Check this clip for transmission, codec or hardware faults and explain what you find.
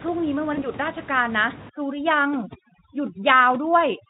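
Two problems stand out, one a transmission fault and one from processing, with steady room noise sitting about 17 dB under the speech and the Speex encoding, which sounds consistent with roughly 18 kbps, adding little or no audible damage.

At 0.53 s there's a short burst of VoIP packet loss concealed by the speech codec. About 40 ms of audio went missing, which fits two 20 ms packets dropping out, and the decoder filled the hole by stretching its last pitch and spectral shape while turning the gain down. You hear a brief buzzy or noisy smear that fades, and because each rebuilt frame leans on the previous one, the speech stays a bit weak and rough until about 0.66 s.

From 1.69 s to the very end there's overdone noise removal. A suppressor set too aggressively is cutting individual frequency bands whenever they dip near its noise estimate, and the quieter parts of the speech get cut along with the room noise. 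The background drops and breaks up into little twinkling, chirpy specks, and the speech loses its softer detail between louder sounds.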